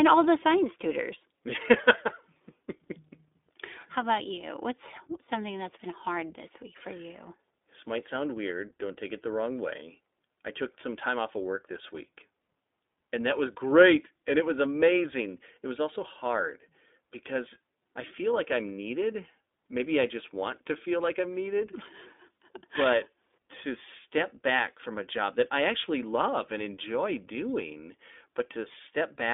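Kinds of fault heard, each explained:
iLBC codec: each 20 ms frame is coded independently by a narrowband VoIP coder, leaving the speech plainly rough and synthetic, which fits its 15.2 kbps mode. On a spectrogram, energy sits only between 250 Hz and 3.6 kHz, empty above.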